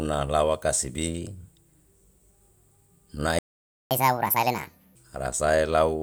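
At 3.39 s the speech cuts out mid-flow and the output stays silent until 3.91 s, a gap of about 0.52 s. This is a playback stall. The player was likely starved of data or had its output thread blocked, so nothing reached the output until it recovered. When sound returns, the speech picks up where it broke off rather than skipping ahead.

From 3.91 s to 4.95 s comes catch-up at higher speed. The player works through the backlog that built up during the stall by resampling it at 1.5 times normal speed. Because resampling changes speed and pitch together, the speech sounds hurried and noticeably raised, by roughly seven semitones, giving a thin, chipmunk-like character. At 4.95 s the lost time has been made up, and playback drops back to normal rate and pitch.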